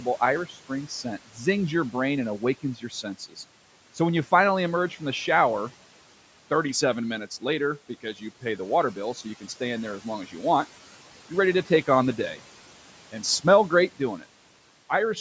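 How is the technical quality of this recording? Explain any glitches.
Two brief glitches stand out, both from the same cause. Between 0.49 and 0.70 s, and again between 2.63 and 3.38 s, the speech gets cut by the noise suppressor. It mistakes bits of speech for background and ducks them by about 9 to 10 dB, so those moments sound swallowed and faint. The faint stretches total only about 100 ms the first time and 150 ms the second. The room noise, sitting about 20 dB under the speech, is part of the recording itself.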